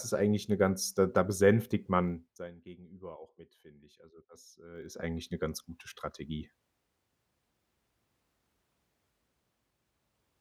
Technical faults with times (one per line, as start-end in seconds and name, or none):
2.04-2.50 zipper noise
4.70-5.06 zipper noise